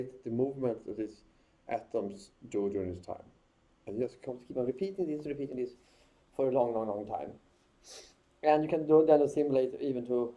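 From 4.27 s to the end there's a wrong sample rate problem: the audio suddenly runs about 1.09 times fast and sits roughly 1.5 semitones higher, with no conversion in between. That ratio fits 22 kHz material played back at 24 kHz, so everything sounds slightly rushed and bright.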